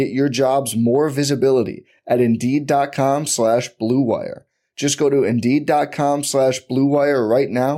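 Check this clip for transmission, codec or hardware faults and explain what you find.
No faults found in this recording.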